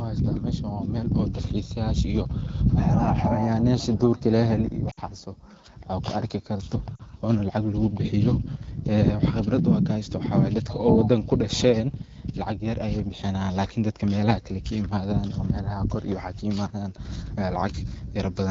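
Radio errors corrupted AMR-WB frames twice, and the decoder had to conceal the gaps (lost AMR speech frames). From 4.91 to 5.00 s, about 60 ms of speech is missing, which fits three 20 ms frames. The decoder stretches the last good pitch and vocal tract shape with falling gain, so the speech smears and dips quickly toward silence. At 6.96 to 7.01 s, just after "kuarki karto", a shorter 40 ms gap produces a briefer dip before wideband speech resumes, weak or rough for a moment.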